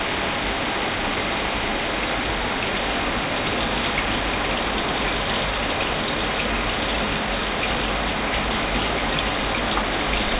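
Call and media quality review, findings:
Call and media quality review findings: no faults found in this sound.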